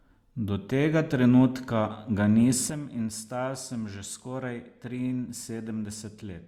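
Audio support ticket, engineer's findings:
Sudden gain jump at 2.70 s: speech and background noise both drop by about 10 dB in one step and stay down to the end. Likely a gain setting or bit shift applied without a ramp, one sample to the next.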